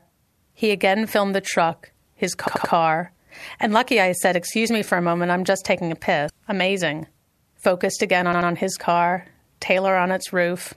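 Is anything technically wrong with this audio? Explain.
Yes, there are two kinds of fault.

Repeated buffer: at 2.48 to 2.73 s, right after "filmed the truck his", a roughly 85 ms chunk plays three extra times. At 8.33 to 8.50 s, after "focused again" and before "his car", it plays two extra times. The length fits a 4096-sample buffer. Fresh audio arrived late, so the device replayed what it held. The result is a stuttering echo with hard joins and almost nothing skipped. On a waveform the identical blocks repeat side by side. On a spectrogram the same pattern tiles with vertical seams.

Damaged data in a compressed stream: at 6.27 to 6.30 s, just after "I'm just taking a", corrupted bytes made the decoder misread frames and lose sync until it found a valid header again. The result is a brief glitch of about 30 ms. A spectrogram shows a short disruption that breaks the surrounding harmonics. 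A waveform shows a discontinuous patch.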